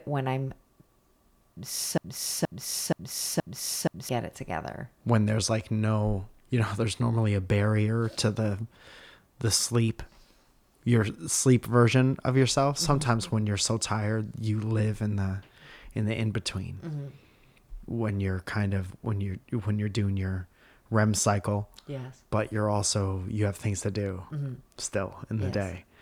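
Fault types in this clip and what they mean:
Broken-record loop: from 1.98 to 4.09 s a 0.47 s fragment of the speech repeats four times back to back, likely from a stalled player or stream resending its last buffer. The waveform and spectrogram show identical blocks tiled end to end, and the speech meant for that span is lost.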